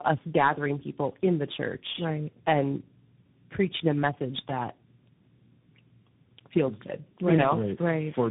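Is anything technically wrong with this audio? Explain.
Yes. Throughout, the speech sounds rough, muffled and warbly, with nothing above 3.8 kHz. This points to tandem speech coding: three speech codecs in a row, likely including G.729A twice and CVSD, each re-coding the last one's degraded output.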